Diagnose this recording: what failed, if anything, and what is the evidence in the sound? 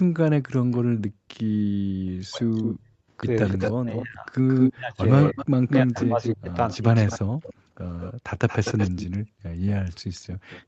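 Echo leak, call processing: a delayed copy, likely from the far end's echo canceller letting loudspeaker sound through, appears faintly at 0.72 s (305 ms delay) and strongly from 2.59 s onward (220 ms delay, about 5 dB down). Unlike reverberation, it is a discrete repeat.

Background gated by the echo canceller: room sound dips by up to about 40 dB at 0.79–1.85 s, 2.76–3.10 s, 7.54–7.74 s and 9.21–10.48 s, then recovers cleanly. Unlike packet loss, only the background drops.

Speech suppressed in double talk: the talker's voice dips sharply at 2.13–2.48 s and in pieces across 3.56–6.89 s, likely because the canceller cut it down while both sides spoke at once.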